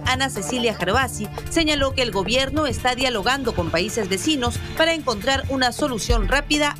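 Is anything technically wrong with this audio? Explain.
No, nothing technically wrong can be heard here.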